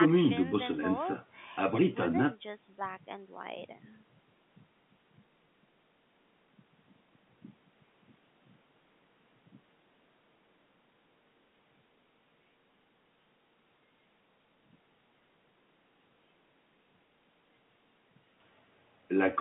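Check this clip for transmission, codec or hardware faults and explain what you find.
No transmission, codec or hardware faults can be heard in the speech. The G.711 telephone coding is working as intended, holding the sound to a line band of roughly 150 Hz to 3.5 kHz with nothing above 3.8 kHz.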